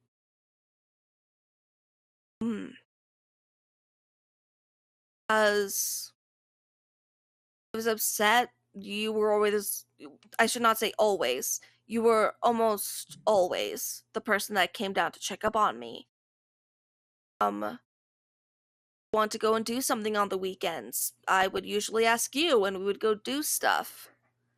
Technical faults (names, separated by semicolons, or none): MP2 compression; clipped start after a pause; DAB burbling